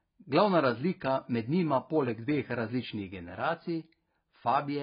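A speech clip that carries heavy AAC compression damage from start to finish, most likely from an AAC-LC encode at a very low bitrate around 16 kbps. Nothing is present above 5 kHz, so the sound is dull, and the content below that limit is smeared and warbly, especially on sibilants. That distinguishes it from a plain low-pass filter, which would leave the remaining band clean rather than degraded by coarse quantisation.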